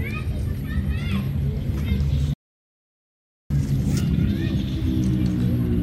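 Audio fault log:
2.34–3.50 s, playback stall: the sound stops in mid-flow and the output holds silent for about 1.16 s before resuming. A gap this long points to the player likely running dry of buffered data or having its output thread blocked, leaving nothing to send until it recovered.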